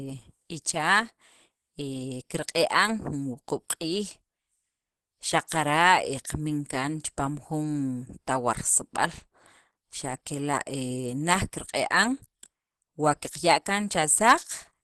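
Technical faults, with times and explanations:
Throughout: Opus compression, likely. The speech has a hard ceiling, with nothing above about 12.4 kHz, and the damage is plainly audible: a muffled, hoarse quality. That fits the encoder in its hybrid mode, where the low band goes through a speech-style coder and the upper band is rebuilt from band energies with folded or noise-filled content. That combination, at a rate that sounds like roughly 16 kbps, gives the rough, grainy texture rather than clean detail.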